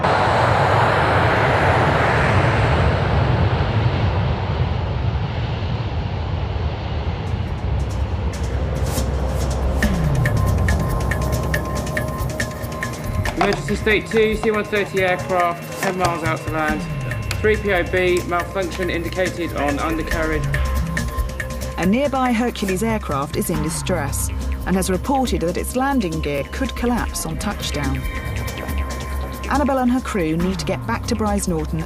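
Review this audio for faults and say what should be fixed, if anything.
At 26.38 to 26.42 s there's a brief Bluetooth stutter. About 23 ms of audio never arrived in time, which points to a single lost frame, so the receiver replayed its last slice and then skipped ahead as if the sound had kept going. To prevent it, keep the Bluetooth link short and clear of 2.4 GHz congestion, or capture over a wired connection instead.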